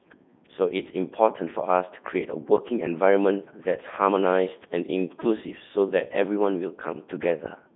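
Robotic, buzzy speech runs the whole way through, with a hollow, synthetic edge, and everything that isn't the single voice comes out mangled. The sound is confined to roughly 150 Hz to 3.6 kHz, with nothing above 3.8 kHz. This is the Codec 2 vocoder at work: it keeps only pitch, voicing, energy and a spectral envelope, then rebuilds the voice from sine waves, discarding the original waveform. The heavy damage fits its top 3.2 kbit/s mode.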